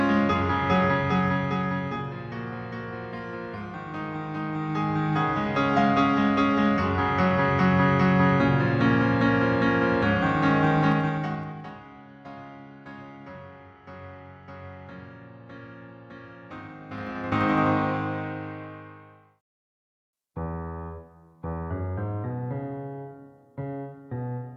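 Zipper noise ticks through level moves at 0.85–2.13 s (down about 10 dB) and 4.44–5.72 s (up about 10 dB) in 1 dB steps, then at 10.84–11.78 s (down about 20 dB) and 16.81–17.66 s (up about 20 dB) in 2 dB steps. Each step lands unsmoothed, roughly ten times a second, so clicks ride on the sound.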